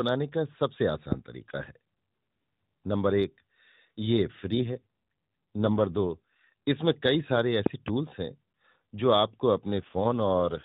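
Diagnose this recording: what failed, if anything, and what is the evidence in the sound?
Two loud pop events sit on top of the speech. The first is a single pop at 1.12 to 1.14 s, around 15 dB above the signal; then a double pop runs 7.66 to 7.90 s, around 20 dB up. This likely comes from an analogue wiring or switching transient riding over the voice.

The AMR rate drop appears at 4.50 to 6.53 s and again from 9.78 s to the end. The codec falls from 12.2 to 5.9 kbps, so the voice turns buzzier and more synthetic. The narrowband limit stays put and there's no gap, which points to the network trading bits for error protection.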